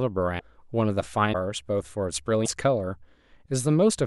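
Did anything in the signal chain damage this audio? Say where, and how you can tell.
Yes, in the codec. Speech jumps ahead with a frame-long glitch at 0.38–0.41, 1.32–1.35 and 2.44–2.47 s. Likely a broken MP3 bit reservoir after lost frames.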